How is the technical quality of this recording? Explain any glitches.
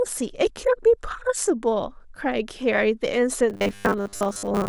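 The recording has one clear fault near its end: robotic sound from repeated short buffers, from 3.50 s to 4.68 s. Over that stretch the speech becomes a rigid, metallic buzz pitched at 100 Hz. The likely cause is new audio arriving too seldom, so playback keeps looping the last 10 ms fragment while most of the real signal, roughly two-thirds or more, is skipped. On a waveform this appears as near-identical 10 ms cycles. A spectrogram shows evenly spaced horizontal harmonic lines every 100 Hz in place of natural speech formants.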